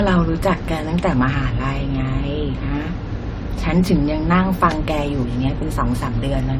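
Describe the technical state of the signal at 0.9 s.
At 0.9 s the speech carries generation loss, present throughout the clip: swirly, hollow smearing, likely from about five AAC passes, with a spectrogram showing patchy holes and nothing above 18.5 kHz.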